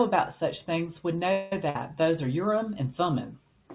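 From 1.32 s to 1.53 s the speech stops moving forward and the last sound is drawn out as a fading buzz or hiss lasting about 0.2 s. The sound then picks up exactly where it left off, with nothing skipped. This is likely a call audio freeze: packets were held up in transit, the jitter buffer ran dry, and the receiver stretched the final sound until delivery resumed, adding a 196 ms delay to the call.

Shortly after, from 1.70 s to 1.76 s, there is a brief held, decaying buzz or hiss of about 50 ms, and the speech resumes slightly further on than where it broke off. This is a burst of packet loss. Roughly 50 ms of audio either never arrived or arrived too late to be played. The receiver bridged the hole by repeating the last sound and turning it down, so that stretch of speech is gone rather than delayed. Throughout the clip, the narrow band with nothing above 4 kHz fits a G.711 A-law call path.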